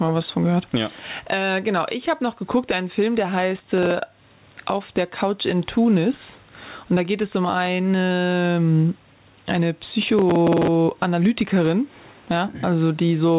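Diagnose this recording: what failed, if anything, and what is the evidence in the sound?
Gain pumping runs through the whole speech clip: the gain swings by about 15 dB under each loud syllable, squashing the dynamics. The likely cause is input gain set far too high, with a fast limiter or compressor clamping it. Unlike a noise gate, it rides the gain down rather than cutting the background off.

Processor overload crackle is a driver or buffer fault, heard at 3.51 to 3.91 s and again at 10.02 to 10.68 s as gritty tearing laid over the speech. The tiny, hard-edged repeats of old audio point to buffers of roughly 5 ms missing their deadlines back to back. Network loss through this G.711 call path, already band-limited at 4 kHz, would instead drop whole codec frames.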